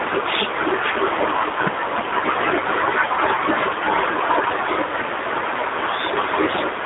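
G.729 codec damage runs through the whole speech clip, plainly audible as a rough, slightly synthetic timbre consistent with an 8 kbit/s stream rebuilt from a vocal tract filter, pitch predictor and sparse pulses, confined to roughly 250 Hz to 3.7 kHz, with nothing above 3.8 kHz.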